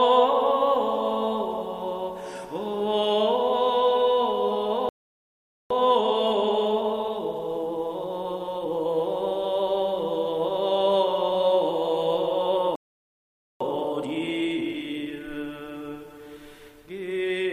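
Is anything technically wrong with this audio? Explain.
Yes, there are two kinds of fault.

Playback stalls interrupt the audio at 4.89 to 5.70 s and 12.76 to 13.61 s. The output falls silent for about 0.82 s and 0.85 s, then resumes. The likely cause is the player running dry of data or its thread being blocked.

Each stall is followed by time-compressed catch-up, from 5.70 to 8.70 s at 1.15 times speed and from 13.61 to 15.31 s at 1.5 times. The player drops small pieces and cross-fades the gaps to clear its backlog. The sound rushes at unchanged pitch.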